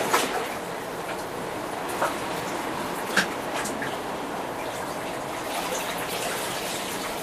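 At 3.07 to 3.12 s and again at 6.08 to 6.12 s, damaged data in a compressed stream garbles frames into a brief chirp, squawk, click or short hole.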